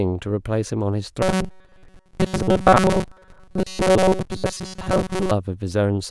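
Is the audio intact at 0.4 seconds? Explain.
Yes, the audio is intact at 0.4 seconds, with no fault present at that moment.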